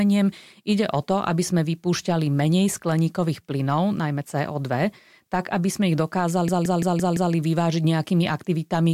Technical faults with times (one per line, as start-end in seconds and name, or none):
6.49-7.34 system hang loop